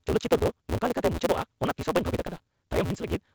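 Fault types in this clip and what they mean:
Block size mismatch (truncated): each block's end is discarded between stages, leaving a 172 Hz buzz, which fits 256-sample reads, and speech 1.88 times faster at about normal pitch.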